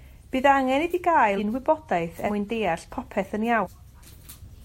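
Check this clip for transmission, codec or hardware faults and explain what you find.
The speech jumps forward three times: at 1.36 to 1.39 s and 3.63 to 3.67 s roughly 300 ms of audio vanishes, and at 2.26 to 2.30 s about 150 ms. These are compressed frames skipped. Whole 42.7 ms frames, several at a time, were missing or rejected as damaged by the decoder.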